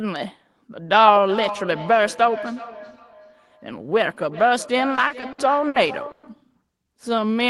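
Feedback echo between two devices runs from 1.26 s to 6.46 s. A second device in the same room is playing this speech aloud, and the first microphone picks it up and sends it back. Neither device's echo canceller removes audio played by the other. Each phrase returns roughly every 0.4 s as a thinner, ringing copy, reaching about 14 dB below the direct speech at its loudest.

Repeated stalls (stutter) overlap the echo from 4.95 s to 6.25 s. Packets arrived late or too slowly, so the jitter buffer ran dry six times. Each time, the receiver stretched the last sound to cover the wait, fading it during the longer ones. The longest gap was 120 ms. About 320 ms was filled this way, a quarter of that stretch. Nothing is lost, but the speech drags and hiccups.

Jitter buffer slow-down follows from 6.84 s to 7.33 s. With its reserve running low, the receiver rebuilt it by repeating individual pitch periods and fragments of pauses several times over. 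This added 51 ms, so the speech plays at about 91% of normal speed without any change in pitch. Sounds are drawn out.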